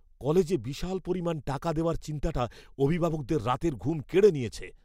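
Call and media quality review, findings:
Nothing to flag on this one, as the speech comes through without any audible faults.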